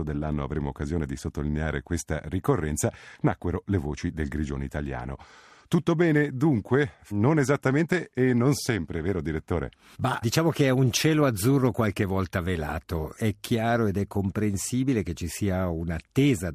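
No technical faults can be heard anywhere in the recording, and the signal keeps an intact level with no dropouts, distortion or interruptions.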